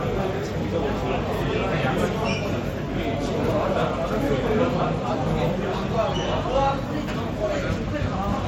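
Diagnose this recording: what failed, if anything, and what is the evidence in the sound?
The codec stage shows generation loss throughout: the audio sounds swirly and hollow, with blurred attacks. A spectrogram shows nothing above 16.5 kHz and holes that shift frame to frame, likely from MP3 re-encoding a few times, fitting around 64 kbit/s.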